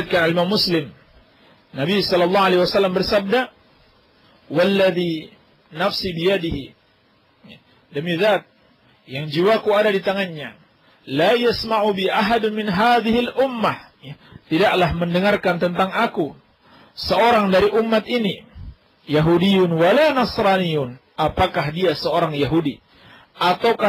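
From start to finish the clip carries sample clock jitter: the converter's timing wanders by a few microseconds, so each sample lands slightly off its proper instant. Steep, fast-moving parts of the waveform suffer most, leaving a grainy hiss roughly 30 dB under the signal that swells on loud, bright passages. Unlike a steady noise floor, it collapses whenever the sound goes quiet, because it rides on the signal itself.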